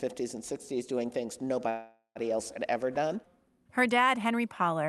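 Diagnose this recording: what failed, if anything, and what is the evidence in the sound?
A call audio freeze occurs from 1.69 to 2.18 s in this speech. The sound just before it is stretched into a buzzy continuation that fades over about 460 ms and ends in a 70 ms silence. The speech then picks up exactly where it stopped. Nothing is lost, but everything afterwards runs 460 ms late. This points to the network stage. Packets were likely delayed in transit, which emptied the jitter buffer and forced the receiver to fill the gap.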